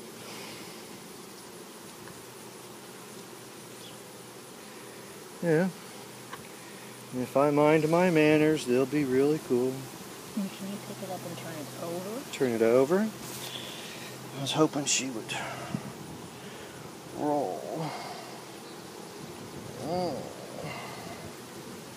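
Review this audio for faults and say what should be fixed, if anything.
At 1.5 s and again at 16.08 s, a short run of output samples was replaced by zeros, giving a block of digital silence about 1.45 ms and 0.73 ms long, which fits blocks of 64 and 32 samples. The signal drops straight to zero and returns with no fade, so each gap is heard as a brief tick.

Giving the audio processing enough time to fill every block before it is due, and checking for invalid values before output, would prevent these dropouts.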